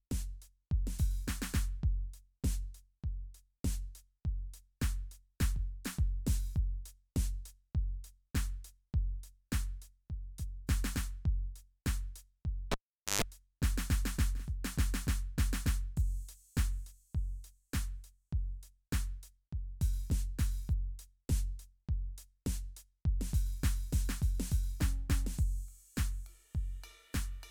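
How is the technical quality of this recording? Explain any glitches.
The recording has one clear glitch, a cable pulled and plugged in. From 12.72 to 13.22 s, a pop cuts the music to near silence for about 450 ms while the live lead is out. As the plug goes back, only the tip touches first, giving about 125 ms of 50 Hz mains buzz. A second pop marks full contact and the music returning.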